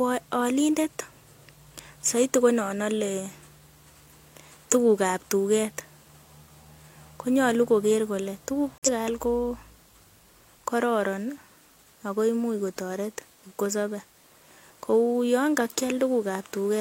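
At about 8.78 s, right after "kole tuguk", there's a corrupt frame muted dropout. The speech cuts dead without any fade, and it's silent until 8.92 s, so roughly 0.14 s, before picking up again at "kaal ko". What happened is that damaged compressed frames got rejected by the decoder and the player filled the gap with silence. The hole's length fits about three frame lengths, and the timing carries on without any shift.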